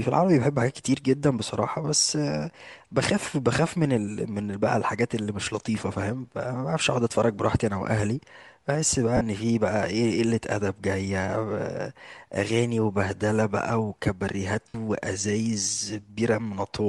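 Speech runs with a plainly audible breathy, grainy edge throughout, with the top of the spectrum sounding hissy and textured, most likely from Bluetooth LC3 compression. An LC3 encoder pressed for bits zeroes much of the upper band and fills it with noise, which fits a modest bitrate and short 7.5 ms frames. That noise-substituted top is what sets it apart from MP3-style swirling or warbling: the upper band turns to hiss instead of chirping. Lost LE Audio frames break in twice, from 9.17 to 9.21 s and from 14.68 to 14.75 s, gaps of about 40 ms and 60 ms that fit runs of several 7.5 ms frames. In each gap the decoder repeats the last spectrum with scrambled phase, so the sound smears into a brief noisy blur before the audio resumes. That smear, rather than a hard silent hole or a click, distinguishes this concealment from a plain dropout.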